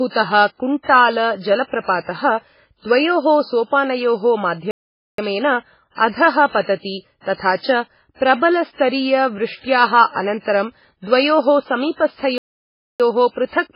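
A speech recording carrying heavy MP3 compression damage across its whole length: the sound is watery and swirly as weak spectral components flicker between frames, which fits a very low bitrate of around 16 kbps. Two playback stalls cut the sound to silence, from 4.71 to 5.18 s (about 0.47 s) right after "द्वयोः सोपानयोः", and from 12.38 to 13.00 s (about 0.62 s). Both are likely caused by the player running out of buffered data before resuming.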